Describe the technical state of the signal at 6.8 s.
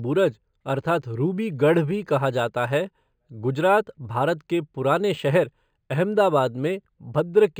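At 6.8 s, as throughout the clip, the speech shows imaging from linear upsampling: raising the rate by joining samples with straight lines, apparently from about 11 kHz to 44.1 kHz, dulls the top and leaves faint mirror images between 5.5 and 11 kHz, roughly 35 dB down, heard as a light metallic shimmer on sibilants.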